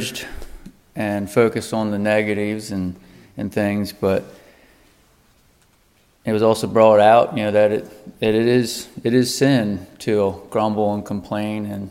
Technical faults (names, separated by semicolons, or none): none